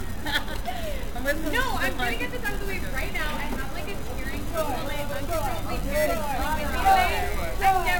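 Throughout, generation loss, likely from about three lossy re-encodes, leaves the sound swirly and hollow. A spectrogram shows speckled holes below a 17 kHz ceiling.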